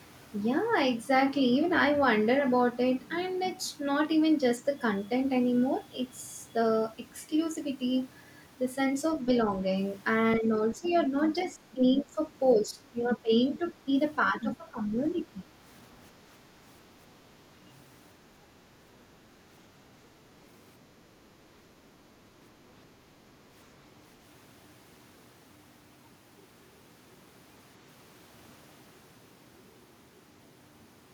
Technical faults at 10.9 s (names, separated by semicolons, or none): speech suppressed in double talk; other side's voice leaking through